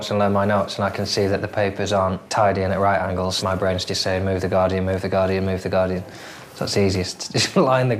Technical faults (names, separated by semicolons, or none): none